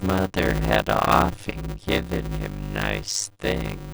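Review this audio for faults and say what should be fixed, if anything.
A block size mismatch (padded) runs through the whole clip: one stage hands over blocks that are too short for the stage reading them, and the shortfall in each block is filled with silence. The 100 Hz buzz, together with speech slowed to about 0.53 times normal speed at roughly its usual pitch, fits 256-sample writes into 480-sample reads. Every block therefore carries a brief zero gap, and the speech is stretched out by those gaps.

Prevention: make the writing and reading stages agree on one block size, or add a buffer between them that accumulates samples until a full block is available.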